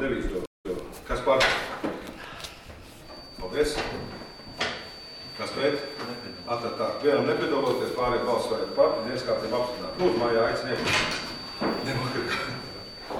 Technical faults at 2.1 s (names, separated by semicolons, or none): none